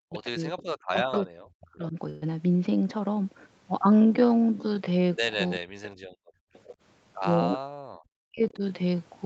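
Speech with three stretches where the voice dips by as much as roughly 40 dB, from 0.0 to 1.96 s, 5.56 to 6.12 s and 7.59 to 8.63 s. This is likely speech suppressed in double talk, with the echo canceller pulling down the near talker while the far side was also active. A faint delayed copy of the voice, an echo leak, surfaces at 0.13 to 0.62 s, 1.12 to 1.18 s, 5.83 to 5.92 s and 6.54 to 6.76 s. It trails the original by about 380 to 390 ms and sits well under the speech, though the scrap at 1.12 s is noticeably louder. That delay and level point to loudspeaker sound that the canceller did not fully remove. A burst of packet loss at 2.09 to 2.26 s replaces about 120 ms of audio with roughly 122 ms of concealment, a held, fading continuation of the previous sound, before playback resumes with that stretch gone. From 6.40 to 6.53 s the background is gated by the echo canceller, and the room sound drops by about 36 dB for a brief moment before returning. 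The band-limiting to 8 kHz is normal for this Opus call path.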